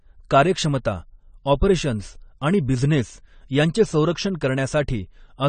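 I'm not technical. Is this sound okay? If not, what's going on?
No, not quite. The speech sounds dull and clearly smeared from start to finish, with a watery, fizzy edge on hissy sounds like s and sh. Nothing comes through above about 9 kHz, so the crisp top end is missing. That's most likely AAC compression squeezed too hard: the encoder throws away the high end and leaves gaps in the detail, so the whole clip sounds flat and warbly.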